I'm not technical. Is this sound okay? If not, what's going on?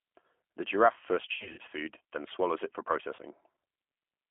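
No, not quite. The whole clip has gone through the G.729 codec, a low-rate phone-call codec that rebuilds speech from a rough model, so it sounds thin, boxy and a bit rough and robotic from start to finish.

There's also VoIP packet loss concealed by the speech codec. Between about 1.34 and 1.61 s, chunks of sound went missing and the decoder filled the gaps with a fading guess, leaving a smeared patch. A shorter dropout happens at about 3.16 to 3.21 s.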